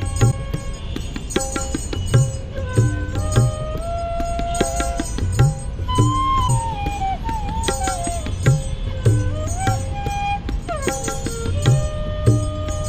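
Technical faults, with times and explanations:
0.30–0.33 s and 6.47–6.50 s, broken MP3 bit reservoir: brief glitches of about 30 ms each, roughly one frame at the 26.1 ms MP3 frame length. The likely cause is missing frames, so the next frame decodes borrowed reservoir bytes from the wrong frame, producing a chirp, a burst of noise or a short hole as the audio jumps ahead.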